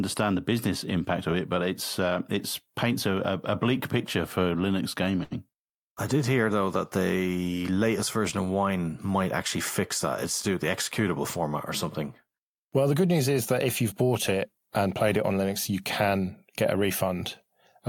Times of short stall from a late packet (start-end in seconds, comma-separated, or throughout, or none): 5.23-5.33